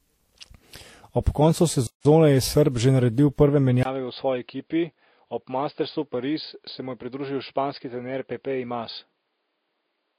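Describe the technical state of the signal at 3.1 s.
At 3.1 s, as throughout, the speech shows transcoding between lossy codecs, likely a low-rate Vorbis encode re-encoded as WMA. The second codec spends bits re-coding the first one's artefacts, so two distinct coding textures overlap rather than one, and nothing sounds above 16.3 kHz.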